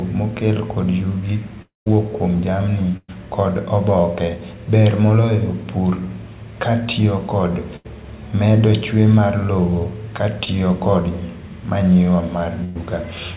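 A long network dropout is the likely cause of the gap from 1.62 to 1.88 s. The last sound is stretched into a fading continuation, then about 150 ms of silence follows, and the audio resumes with roughly 240 ms of speech gone.

A burst of packet loss hits from 2.97 to 3.10 s. About 120 ms of audio failed to arrive, so the receiver extended the previous sound and faded it, ending in a brief silence before the speech jumps ahead.

Two more bursts follow the same pattern. From 7.76 to 7.86 s, about 80 ms is missing and is bridged by a held, fading continuation. From 12.64 to 12.77 s, about 100 ms is lost and covered entirely by the fading continuation, with no silence.

Short concealed packet loss occurs between 10.44 and 10.48 s. About 20 ms never reached the decoder in time. The receiver patched it by continuing the preceding sound and blending back in, which is heard as a momentary smear.

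Throughout, the call path's 64 kbps G.711 mu-law coding leaves nothing above 4 kHz.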